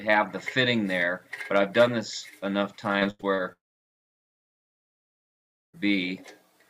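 From 2.99 to 3.40 s you get repeated packet loss with a robotic sound: five short holes, the longest 87 ms, patched over so about 41% of that stretch is choppy filler. Then from 3.52 to 5.79 s the sound smears into a fading buzz and drops to near silence for about 2.1 s before returning with that chunk gone, most likely a long network dropout.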